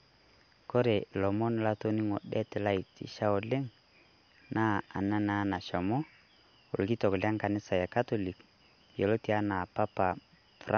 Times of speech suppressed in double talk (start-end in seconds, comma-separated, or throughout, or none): none